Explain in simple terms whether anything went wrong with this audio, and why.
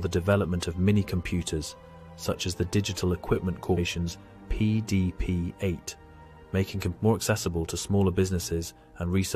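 At 3.76 s there is a brief glitch caused by damaged data in a compressed stream. A small piece of the encoded file was corrupted, so the decoder lost its place for a moment.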